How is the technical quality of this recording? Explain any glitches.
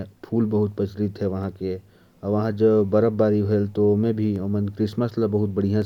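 The recording has one recurring glitch, clock drift buffer slips, from 1.43 s to 5.82 s. About four clicks land at a steady interval of about 1.47 s while the speech continues. The likely cause is two devices running on separate clocks that disagree by a couple of hundred parts per million. The buffer between them gradually over- or underfills until a tiny block of samples, around fifteen, is dropped or repeated, and each correction produces a brief tick.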